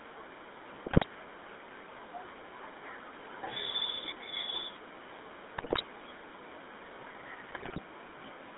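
Throughout, the speech has passed through the GSM full-rate codec, which rebuilds the voice from a vocal-tract filter driven by coarse, regularly spaced pulses. This fits the 13 kbps full-rate coder. The result is a plainly buzzy, gravelly roughness inside a narrow band of about 250 Hz to 3.7 kHz.

At 0.86 to 1.05 s, 5.58 to 5.83 s and 7.48 to 7.81 s, GSM bit errors corrupt the decoder's filter, pitch and gain values. For those short stretches the voice bursts into squawks, pops and gargling. The middle burst has the highest bit error rate, about 6.4%.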